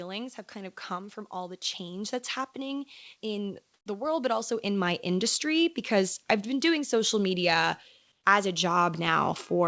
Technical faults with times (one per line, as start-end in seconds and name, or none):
0.52-5.02 automatic gain rising
3.74-3.86 comfort noise in place of the background
8.12-8.24 comfort noise in place of the background